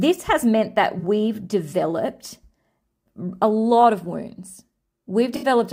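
At 0.99 to 1.04 s, the speech turns briefly smeared and phasey, which fits two lost AAC frames. That is AAC frame loss with concealment: the decoder rebuilds missing audio from the last good spectrum. The same smear returns at 5.36 to 5.46 s, consistent with three frames.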